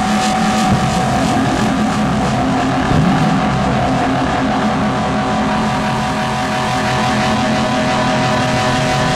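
No technical faults can be heard anywhere in this audio.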